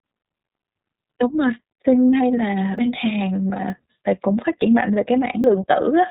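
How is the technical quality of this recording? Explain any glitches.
The quality is poor. Two faults stand out.

The whole clip carries iLBC codec damage. Nothing above 4 kHz survives, so the speech sounds muffled and narrowband. Each 30 ms frame is coded on its own, which makes the voice rough and synthetic. The damage is plainly audible and fits the 13.33 kbps mode.

Five forward jumps occur at 0.9, 2.78, 3.7, 4.62 and 5.44 s. These are likely dropped buffers from an overrun: samples were overwritten before being read, so the sound skips ahead without silence. About 70 ms goes first, about 40 ms second, and about 20 ms at each later point.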